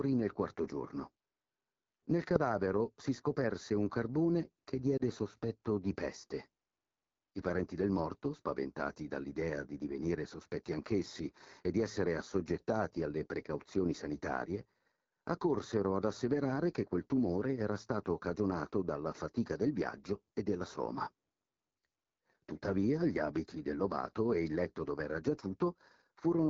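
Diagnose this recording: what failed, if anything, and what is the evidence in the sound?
Channel delay (comb filtering), at the mixing or playback stage: one channel lags the other by a fraction of a millisecond and they are summed to mono. The first cancellation falls around 3 kHz, giving a hollow sound throughout. A spectrogram shows fixed, evenly spaced dark horizontal notch bands.

AMR wideband (HD Voice) codec: the whole clip is speech with audible codec damage, rough and raspy, which points to one of the lowest AMR-WB rates, near 8.85 kbit/s. On a spectrogram, harmonics stop at 6.4 kHz and give way to a smeared noise band up to 7 kHz.

Lost AMR speech frames, on the radio link: between 4.98 and 5.02 s, after "scoperse un carbone che" and before "sospetto di peste", the sound briefly dips or warbles as the decoder extrapolates. The brevity fits a single lost 20 ms frame. The waveform shows a short sag in the envelope.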